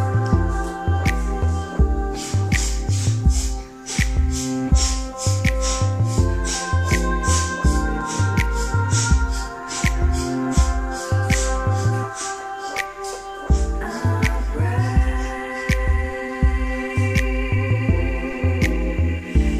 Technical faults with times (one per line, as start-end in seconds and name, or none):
none